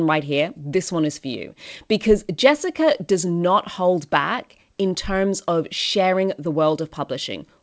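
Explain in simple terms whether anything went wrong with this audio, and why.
Nothing went wrong with this speech recording. It came through a normal internet call connection using the G.722 codec, which leaves out everything above about 8 kHz, so the voice lacks the very top end of crispness, as expected for that kind of call.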